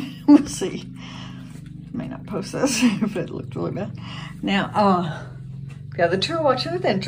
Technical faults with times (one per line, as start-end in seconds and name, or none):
0.53-1.08 CD scratch ticks